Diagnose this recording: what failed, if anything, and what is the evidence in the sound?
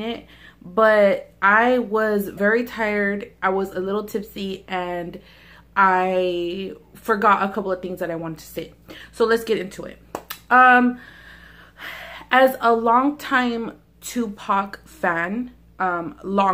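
The codec stage likely failed: frames went missing from the MP3 stream, so the next frame reached back into the bit reservoir and decoded another frame's bytes, a broken MP3 bit reservoir. The audio jumps ahead at 2.37 to 2.39 s, leaving a brief disturbance about one 26 ms frame long.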